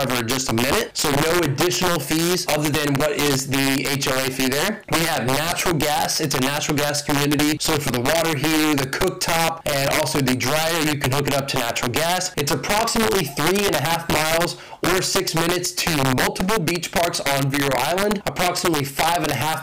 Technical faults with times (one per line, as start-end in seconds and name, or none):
0.00-19.62 integer overflow